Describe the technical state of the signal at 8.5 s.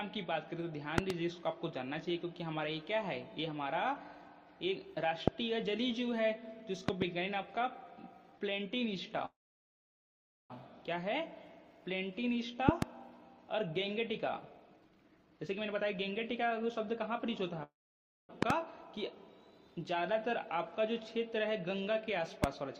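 At 8.5 s the signal is intact, with no dropout, distortion, glitch or other technical fault audible at that moment.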